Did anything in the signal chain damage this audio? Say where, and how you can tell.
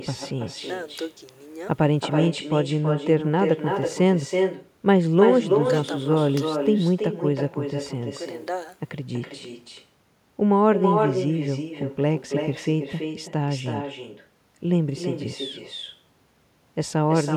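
Yes. In the call processing, no echo canceller runs on the far end, so its loudspeaker output leaks back into its microphone and returns. Throughout the speech, each phrase is trailed about a third of a second later by a thinner copy about 6 dB quieter.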